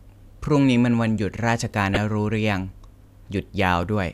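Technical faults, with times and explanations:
1.94–1.97 s, corrupt frame decoded: one compressed frame of this speech arrived with damaged bits, and the decoder played it instead of discarding or concealing it. The misread gains and codes sent energy to frequencies that don't belong to the signal for roughly 30 ms, the span of that single frame. The result is a brief blip that peaks around -5 dBFS.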